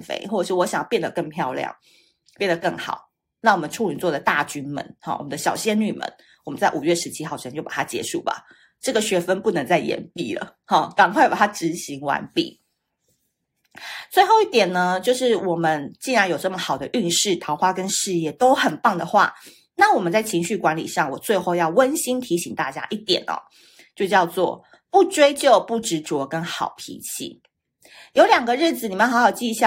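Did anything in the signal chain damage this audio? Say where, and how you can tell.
No, nothing along the chain left a mark on this speech that I can hear, so there's no stage to point a finger at.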